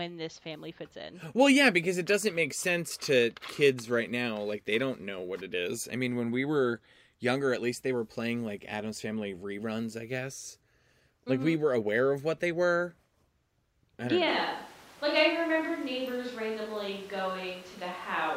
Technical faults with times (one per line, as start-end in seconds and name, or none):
14.28-18.36 switch to a distant microphone